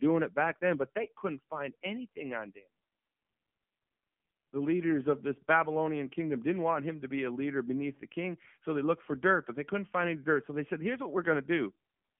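From start to end, the speech has passed through the AMR narrowband mobile codec, and the damage is plainly audible. Everything sits within a line band of about 150 Hz to 3.4 kHz. The voice is rebuilt from a vocal-tract model fed by sparse pulses, so it comes across buzzy and synthetic, which points to a low mode around 7.4 kbps. A spectrogram shows a hard ceiling near 3.4 kHz with nothing above and smeared, blocky harmonics beneath it.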